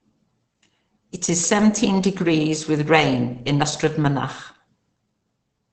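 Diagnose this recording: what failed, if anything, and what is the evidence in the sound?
Codec stage. Throughout, the speech is muffled and hoarse, with nothing above 8.9 kHz. This is likely Opus compression in its speech mode, fitting a bitrate near 16 kbps.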